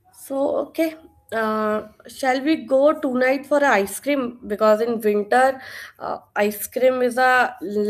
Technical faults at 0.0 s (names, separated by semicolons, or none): none